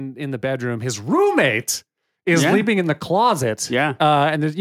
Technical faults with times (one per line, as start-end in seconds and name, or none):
0.13-1.61 automatic gain rising